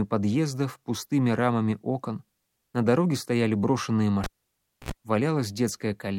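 At 4.24 s a live cable is pulled and plugged in. A pop drops to near silence for 630 ms, then 74 ms of 60 Hz mains buzz, another pop at 4.92 s.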